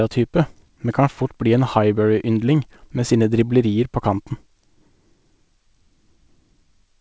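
No technical faults can be heard anywhere in the speech. It has come through a working WebRTC call path, and nothing is present above about 8 kHz, which fits a wideband codec such as G.722.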